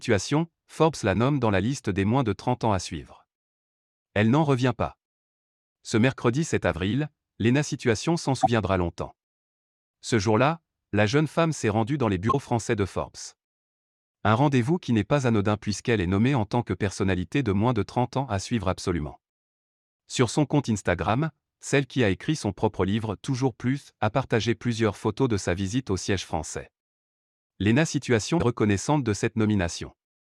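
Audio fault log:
8.40 s, 12.29 s, 21.06 s, 28.37 s: compressed frames skipped. At each point whole frames of the coded stream never play, whether lost from the file or rejected by the decoder as damaged. The speech jumps forward by about 40 ms at the first three, between "s'est rendue dans les" and "français de" at 12.29 s and between "son compte" and "celle qui a écrit" at 21.06 s, and by about 100 ms at 28.37 s.
15.69–15.73 s: corrupt frame decoded. Right after "qui n'est pas anodin" and before "est nommée en tant", roughly two frames with flipped bits were decoded anyway. Misread gains and codes push energy to the wrong frequencies for the length of those frames, giving a brief burst of misplaced energy that peaks at about −25 dBFS.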